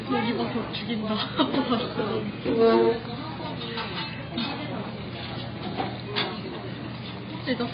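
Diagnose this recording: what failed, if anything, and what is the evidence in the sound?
AAC compression, heard throughout, is the likely cause of the damage at the codec stage. Nothing is present above 5 kHz, so the sound is dull, and the band that remains has a smeared, warbling, fizzy texture typical of heavy AAC-LC artefacts. The encoder, starved of bits, dropped the upper spectrum entirely and quantised the rest so coarsely that detail is lost, which fits a very low bitrate around 16 kbps.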